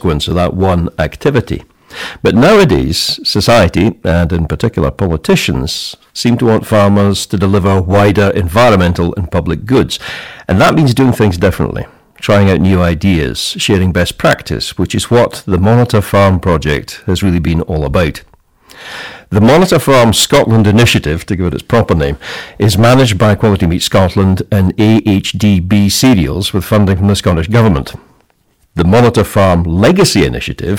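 Hard clipping runs through the whole recording, from start to end. The speech was driven about 17 dB past what one stage in the chain could pass, so every peak above that ceiling was sliced flat, and around a tenth of all samples sit pinned at the limit. Those squared-off tops add harmonics far up the spectrum, heard as a harsh, buzzing fuzz on every louder syllable rather than occasional crackle.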